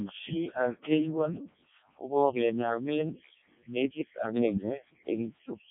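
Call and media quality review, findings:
Codec 2 vocoder at its lowest rate, throughout the clip, rebuilding speech from pitch and envelope alone: heavy robotic buzz, nothing above 3.8 kHz, damage fitting roughly 0.7 kbit/s.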